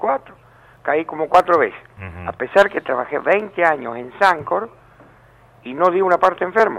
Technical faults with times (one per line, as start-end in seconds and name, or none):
0.40-4.39 periodic USB or driver dropouts